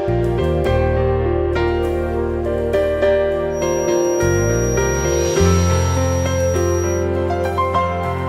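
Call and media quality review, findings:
Thin whistle at 5.7 kHz, slowly swelling and fading, about 15 dB below the sound, 3.48–7.09 s. Feedback whistle: likely loudspeaker-to-microphone loop held just short of runaway oscillation.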